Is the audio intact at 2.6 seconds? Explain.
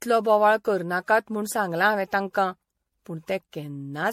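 No, at 2.6 seconds you're hearing generation loss, and it runs through the whole clip. The speech sounds swirly, hollow and smeared, with soft attacks and nothing above 16.5 kHz, which points to 64 kbit/s MP3 likely re-encoded around seven times, each pass stacking fresh quantisation noise.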